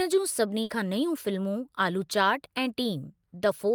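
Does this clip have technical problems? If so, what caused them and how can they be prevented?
Yes: a burst of packet loss at 0.63–0.71 s, just before "खां नयूं", where about 60 ms of sound vanished and was concealed. The receiver extended the preceding sound and faded it, so the spectrogram shows a smeared, decaying stretch ending in an abrupt jump. Forward error correction and a larger jitter buffer would prevent it.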